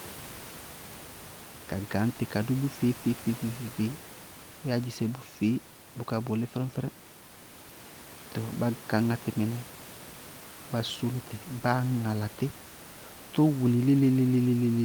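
There are no technical faults to describe in time order; the only background sound is room noise sitting about 18 dB below the speech.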